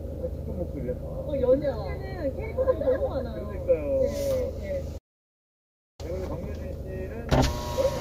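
At 4.97 s the sound cuts out completely. It returns at 6.00 s, after about a second of silence. This is a playback stall. The likely cause is the player running short of data or being blocked until it recovered.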